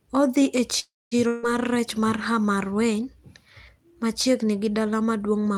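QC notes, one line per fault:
0.79–1.14 s, call audio freeze: packets were likely held up in transit and the jitter buffer ran dry, so the receiver stretched the last sound over about 320 ms. It begins as a fading buzz and falls to silence for roughly the final 220 ms. When the packets arrive, the speech resumes exactly where it stopped. Nothing is lost, but everything after this point plays about 320 ms later than it should.
1.27–1.46 s, long network dropout: a run of audio likely never reached the receiver, and about 160 ms of speech is gone for good. The gap is filled with concealment for roughly 150 ms, a decaying buzz carried over from the last sound, with no fully silent stretch. The speech then returns at a later point rather than where it left off, so the listener hears a jump where part of the utterance has been skipped.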